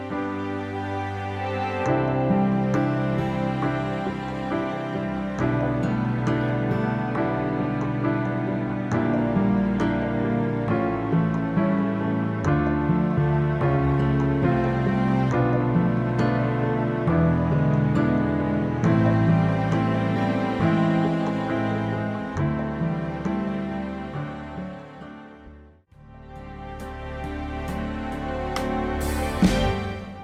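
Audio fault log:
13.17–13.19 s skip ahead: about 0.7 s of audio is lost as playback lurches forward with no gap, as if the buffer discarded queued audio to catch up. The waveform and spectrogram show two unrelated stretches butted together, with an abrupt discontinuity and a mismatched edge at the join.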